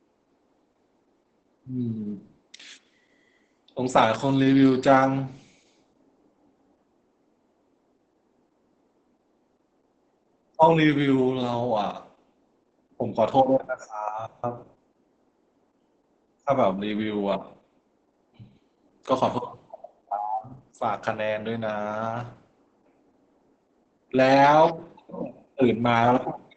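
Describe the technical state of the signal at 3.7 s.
Muffled and hoarse at 3.7 s, with a slightly robotic edge and nothing above about 8 kHz. This is Opus voice compression, present throughout the clip rather than just at this moment. The SILK linear-prediction coder is running in wideband and coding the excitation coarsely, so the speech keeps its outline but loses texture. The heavy damage points to a very low rate, something around 10 kbps.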